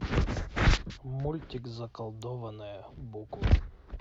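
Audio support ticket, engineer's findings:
Sharp snap laid over the speech at 2.22 s, quiet, peaking around -35 dBFS. Electrical switching spike, likely a nearby switch, motor or static discharge arcing briefly and coupling into the audio line as an added click.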